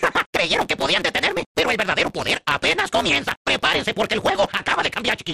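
From start to finish there's a block size mismatch (truncated): block ends get dropped, leaving a 172 Hz buzz and audio running 1.88 times fast, which fits 256-sample reads.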